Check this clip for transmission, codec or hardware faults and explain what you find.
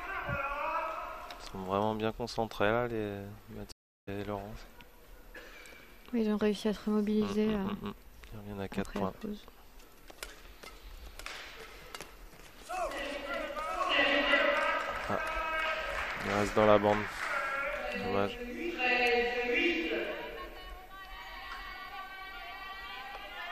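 One fault, a stream reconnect from 3.72 to 4.09 s. The connection dropped and the player restarted its decoder mid-stream, leaving about 0.36 s of silence, after which the audio resumes roughly 0.4 s further on.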